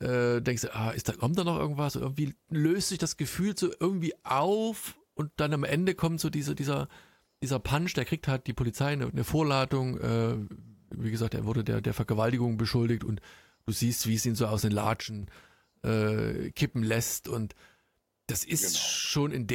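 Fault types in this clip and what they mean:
Sudden gain jump: from 15.02 to 15.23 s the speech and background noise drop together by about 8 dB, likely an unramped digital gain change.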